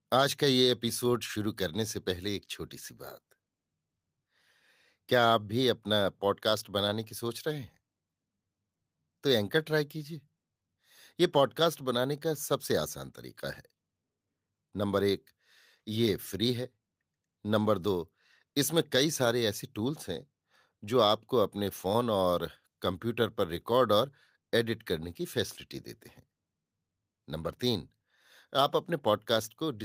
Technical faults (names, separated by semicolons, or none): none